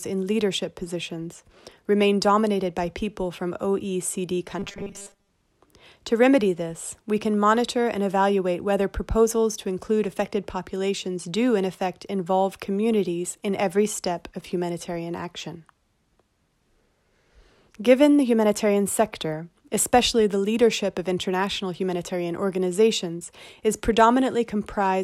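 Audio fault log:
4.59–5.30 s: robotic sound from repeated short buffers. The speech collapses into a rigid, metallic buzz pitched at 200 Hz that only loosely tracks the spoken contour. The likely cause is that incoming audio arrived too slowly and playback filled the gaps by looping the last short block, roughly 5 ms long to match the 200 Hz pitch, so most of this stretch is repetition while the actual speech in between is skipped.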